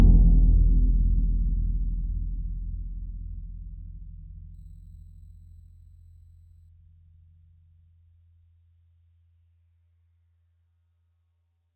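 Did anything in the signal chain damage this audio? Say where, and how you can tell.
Yes: imaging from sample-and-hold upsampling at the sample-rate conversion stage, 4.54 to 6.69 s. The music went from 8 kHz to 48 kHz by repeating samples unfiltered, mirroring its spectrum around multiples of 8 kHz. The first image, 4 to 8 kHz, is a metallic fizz about 36 dB down.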